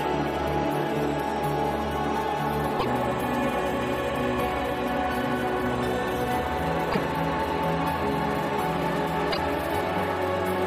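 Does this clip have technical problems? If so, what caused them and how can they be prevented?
Yes. Damaged data in a compressed stream appears at 2.76–2.85 s, 6.89–6.98 s and 9.29–9.38 s, each a blip of about 0.1 s. Corrupted bytes leave the decoder misreading frames and losing sync until it locks onto the next valid frame header. Prevention: carry the audio over a checksummed, error-corrected transport and verify file integrity after transfer.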